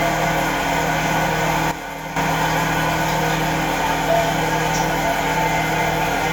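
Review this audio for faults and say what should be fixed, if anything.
A sudden gain jump drops the audio and its background noise together by about 9 dB from 1.71 s to 2.16 s, likely from a digital gain change applied without a ramp. Fix it by ramping every gain change over a few milliseconds instead of switching it between samples.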